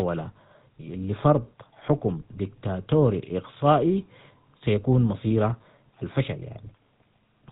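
The whole recording has passed through the GSM full-rate codec, the original mobile-phone speech coder, at a setting consistent with its 13 kbps rate. The coder keeps a model of the vocal tract and excites it with a thinned, evenly spaced pulse train instead of the real waveform, and it discards everything above 4 kHz. The speech therefore sounds dull and band-limited from start to finish, with a plainly audible buzzy, gravelly texture on every voiced stretch.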